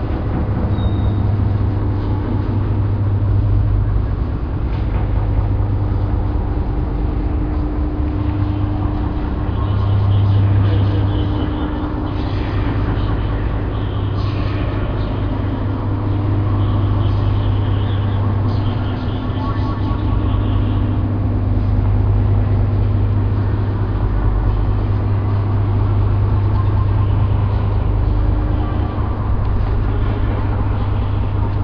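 Listening to this recording of sounds, nothing stood out as a technical fault at any point.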